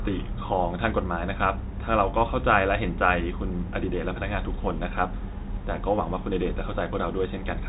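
No technical faults can be heard anywhere in this speech.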